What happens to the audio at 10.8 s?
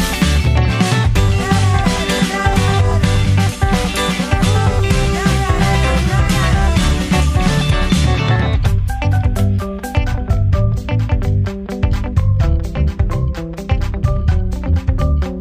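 Channel delay (comb filtering) runs from 9.97 s to the end. One channel lags by about two samples. Summing cancels frequencies near 10 kHz, dulling the top end.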